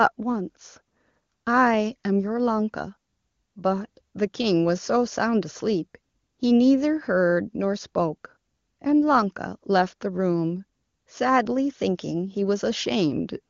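Speech with no technical faults to be heard. It has passed through the AMR wideband (HD Voice) codec at 23.85 kbit/s, its highest rate, so the band stops near 7 kHz and any coding effect on the speech is faint at most.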